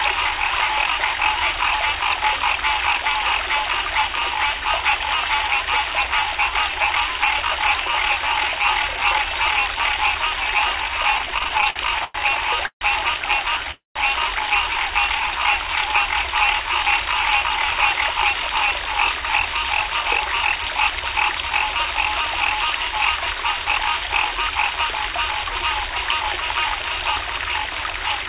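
Everyday sounds, heard through a narrowband call path that leaves nothing above 4 kHz (consistent with G.711 mu-law), have four kinds of playout fault. From 11.18 to 12.16 s, packets kept arriving late or too slowly and the jitter buffer ran dry again and again. The result is repeated stalls (stutter): 11 short gaps, the longest 102 ms, filled by stretching the last sound. That concealment makes up a quarter of the span, about 242 ms in total. Nothing is lost, but the sound drags and jerks. Right after this come two call audio freezes, most likely from packets held up in transit that emptied the buffer. At 12.66 to 12.83 s the receiver extends the last sound as a fading buzz or hiss for 147 ms, about 90 ms of it decaying to silence. At 13.71 to 13.98 s a longer 242 ms hold fades to roughly 160 ms of silence. In both cases the audio resumes where it stopped, so a gap is inserted and nothing is dropped. 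From 15.08 to 15.40 s the buffer, running low or having just raised its target delay, rebuilds its reserve with a jitter buffer slow-down. It repeats single pitch periods or bits of pause, adding 35 ms, so the sound plays at about 90% speed with unchanged pitch and drawn-out sounds. Later, from 17.40 to 21.52 s, the buffer holds more than it aims for and sheds the excess with a jitter buffer speed-up. It trims many tiny slices, around 0.3 s in all, and the sound runs about 7% fast at the same pitch, a little hurried throughout that stretch.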